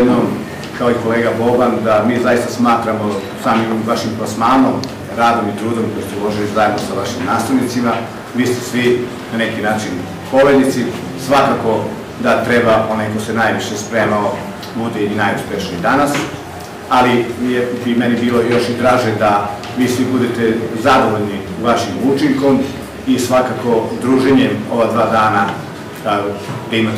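Hard clipping runs through the whole clip. The signal is driven about 13 dB too hot, so peaks are cut flat. A small share of samples is affected, and loud moments turn harsh and fuzzy.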